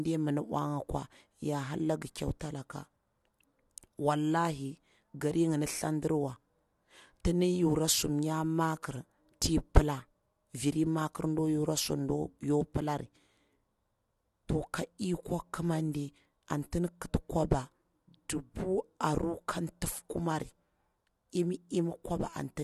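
Pre-echo at 2.40 s, just after "ya hara langi": a transform codec spread its quantisation noise across the whole block, so noise meant for a sharp attack leaked into the quiet 12 ms before it, heard as a brief hiss smearing the attack's onset.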